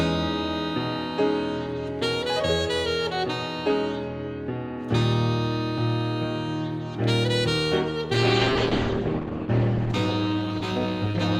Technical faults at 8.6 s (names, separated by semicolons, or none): call bitrate drop